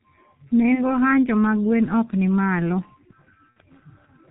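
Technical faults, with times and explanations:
Throughout: G.723.1 codec. The speech is muffled and hoarse, with smeared consonants and nothing audible above 4 kHz. This low-rate telephony codec works in 30 ms frames at about 6.3 kbit/s here and updates its model of the voice only slowly. Fast articulation gets averaged away and the upper band is discarded. The damage is heavy, so the roughness is present on every phrase.
3.51 to 3.58 s: VoIP packet loss concealed by the speech codec. The voice is briefly stretched into a buzzy tone or a coloured noise that fades in level, then sounds weak or distorted as it resumes. About 60 ms of audio was missing, which fits two lost 30 ms frames. The decoder filled the gap by repeating its last pitch and filter with falling gain. Because each frame depends on the previous one, the recovery lags behind.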